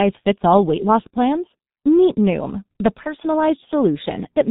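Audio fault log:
Throughout, G.723.1 codec: the speech is muffled and hoarse, with nothing above 4 kHz and consonants smeared into each other. The damage is heavy and fits a low-rate setting near 6.3 kbit/s, where the coder rebuilds each 30 ms block from a coarse vocal model that is refreshed only slowly. Fast transitions between sounds fall between updates, and the rough excitation gives the voice its grainy, strained edge.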